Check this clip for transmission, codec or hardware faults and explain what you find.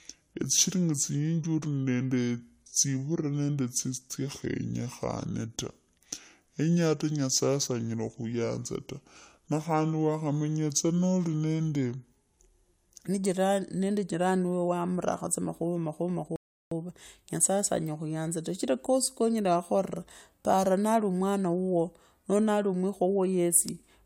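Two faults stand out in this speech clip: a slowed opening section and a brief playback stall.

From 0.0 to 13.07 s the speech sounds deep, sluggish and drawn out, roughly five semitones low. This is a section at the wrong speed, running at 0.76 times normal. Pitch and tempo drop together, likely because playback was clocked at the wrong rate for that stretch.

At 16.36 s the sound drops into silence, then picks up at 16.71 s exactly where it left off. This rebuffering stall adds 354 ms. The player ran short of downloaded audio and waited for more, so nothing is missing, only delayed.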